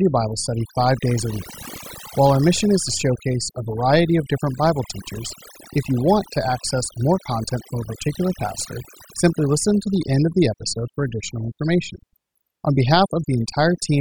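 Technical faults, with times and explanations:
Throughout: overdone noise removal. The noise reduction was pushed too hard on a noisy recording, so any frequency band that sits close to the tool's noise estimate gets pulled far down or switched off, and the quieter parts of the speech are cut along with the noise. What remains of the background breaks into twinkling, warbling specks. On a spectrogram this appears as scattered isolated blobs in the gaps between words instead of an even noise floor.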